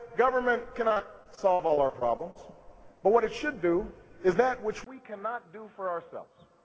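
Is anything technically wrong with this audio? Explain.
Yes, there are two faults. From 0.88 to 2.37 s the sound turns choppy and robotic, with pieces dropping out. This is repeated packet loss: twelve gaps, the longest 61 ms, each patched by stretching the preceding sound, so about 21% of that stretch is concealment.

From 4.84 s to the end, after a 20 ms silence, the sound drops about 10 dB, loses everything above 3.8 kHz (the call path itself reaches 8 kHz), and gains new background noise roughly 45 dB down. The likely cause is the input switching to a poorer device.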